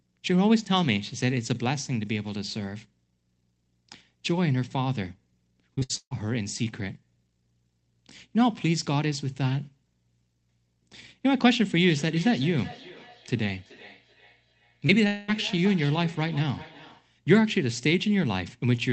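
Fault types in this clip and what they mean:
Repeated packet loss (robotic sound): from 5.75 to 6.13 s, four gaps were patched by continuing the last sound, giving choppy, robotic audio; the spectrogram shows smeared, repeated harmonic blocks.
Feedback echo between two devices: from 11.89 to 17.13 s, the sound returns roughly every 0.4 s at about 18 dB below; the spectrogram shows faint, thinner copies stacked at regular spacing.
Short concealed packet loss: at 14.87 s, 20 ms was lost and 15 ms was filled in as a brief smear; the waveform shows a tiny, unnaturally regular patch.
Long network dropout: from 15.07 to 15.30 s, about 0.22 s was lost and a fading buzz or hiss fills about 0.21 s, likely from a run of lost packets; the spectrogram shows a blurred, decaying band.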